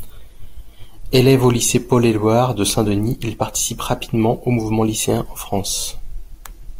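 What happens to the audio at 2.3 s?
Nothing goes wrong at 2.3 s: the speech runs through that moment intact, with no dropout, click, glitch or other audible fault.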